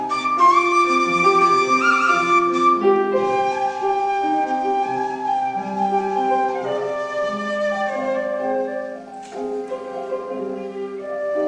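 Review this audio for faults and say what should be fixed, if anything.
No faults found; nothing needs fixing.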